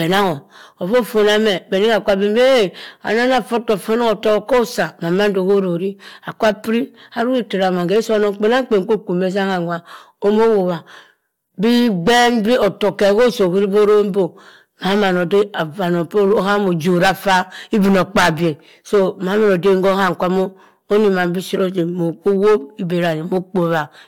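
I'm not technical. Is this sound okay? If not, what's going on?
No. The speech has hard clipping throughout. It is far too loud for the recording, so peaks get chopped flat, causing harsh fuzz.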